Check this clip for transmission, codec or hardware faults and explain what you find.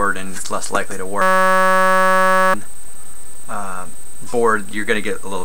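One hardware fault is present. A system hang loop runs from 1.22 to 2.54 s. The system froze while the sound hardware replayed one 5.33 ms buffer, which fits a 256-sample ring buffer. This produces a steady 188 Hz buzz, and about one and a half seconds of audio are lost.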